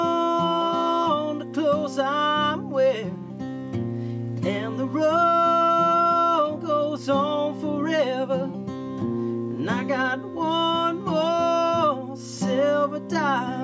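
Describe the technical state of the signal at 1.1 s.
The audio at 1.1 s is intact, with no technical fault present at that point.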